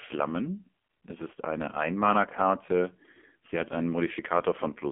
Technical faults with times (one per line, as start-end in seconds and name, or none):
0.00-4.91 AMR narrowband mobile codec